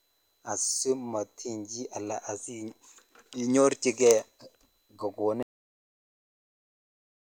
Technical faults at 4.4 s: none

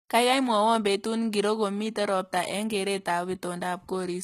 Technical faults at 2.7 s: HE-AAC compression

